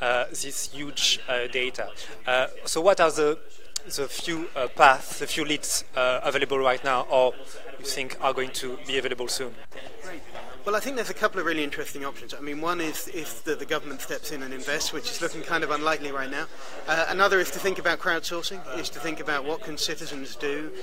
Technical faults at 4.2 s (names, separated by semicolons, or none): train of clicks